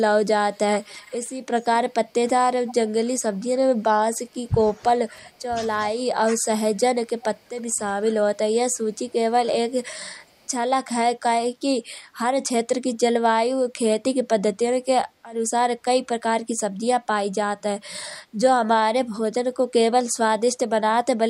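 An echo canceller at the far end likely failed to remove all of its loudspeaker's sound from its microphone, so an echo leak returns a delayed copy of the speech about 345 ms late. It first appears from 0.52 to 1.35 s, about 25 dB below the speech, then as brief scraps at 1.61 to 1.65 s (about 30 dB down) and 2.69 to 2.74 s (about 20 dB down). Each sounds like a faint shadow trailing the talker.

From 2.12 to 4.58 s, the same device likely could not tell the local talker from the loudspeaker echo while both sides spoke at once, and turned everything down. This is speech suppressed in double talk. The voice dips by as much as 15 dB or so. The same dipping returns from 4.77 to 5.55 s and over a longer stretch from 5.77 to 10.06 s.

Echo leaks with the same 345 ms delay return from 10.24 to 10.47 s, very faint at about 40 dB below the speech, and from 12.95 to 12.99 s, about 30 dB down.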